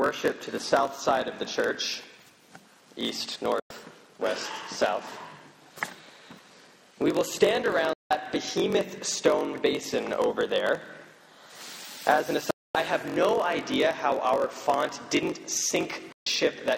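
From start to finish, a block size mismatch (padded) means one stage delivers shorter blocks than the next one reads, consistent with a 1024-sample read block. Zeros fill each shortfall, putting a 46.9 Hz buzz under the sound and slowing it to 0.938 times normal speed at roughly unchanged pitch.

Digital broadcast dropouts follow at 3.60, 7.93, 12.51 and 16.12 s. The receiver lost valid frames and muted until good ones returned. Each time the sound fades out within about 3 ms and stays silent for roughly 0.11, 0.18, 0.25 and 0.14 s.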